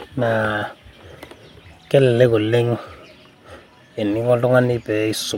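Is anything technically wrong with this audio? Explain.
No, nothing technically wrong can be heard in this speech recording.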